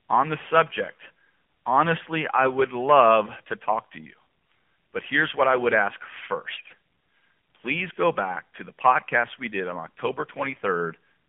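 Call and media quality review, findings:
AMR narrowband mobile codec, throughout: low-rate speech coding, consistent with about 7.4 kbps AMR-NB, band limited to roughly 200 Hz to 3.4 kHz. Sparse pulse excitation leaves speech buzzy and synthetic, with no content above 3.4 kHz; codec damage plainly audible.

AMR bit errors, 6.50 to 6.73 s: weak radio link flipping the less-protected frame bits, with the checksum on the core bits still passing, at an error rate of several percent. Speech keeps its pitch and level but turns hoarse, scratchy and gargly across roughly a dozen 20 ms frames.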